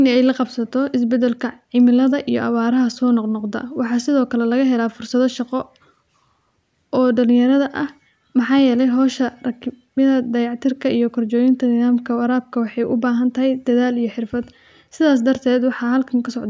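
No technical faults are audible.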